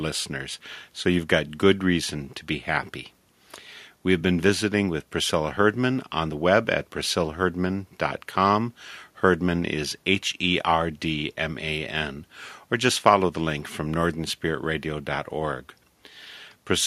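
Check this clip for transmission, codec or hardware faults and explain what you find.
Nothing here points to trouble in the transmission, the encoding or the hardware, so there's nothing in this speech to flag.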